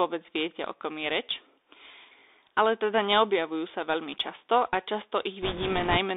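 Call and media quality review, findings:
Bluetooth CVSD headset codec, whole clip. Narrowband sound, nothing below about 300 Hz or above 3.7 kHz. Scratchy s sounds, granular hiss underneath. Fits a 64 kbps CVSD link. One-bit delta steps cannot track fast high-frequency swings, so loud peaks distort.

Bit errors on a Bluetooth voice link, 5.42 to 5.97 s. Rushing, crackly noise over the speech, no loud clicks. Points to a few percent of bits flipped on the headset link. Each bit carries small weight and errors decay, giving crackle.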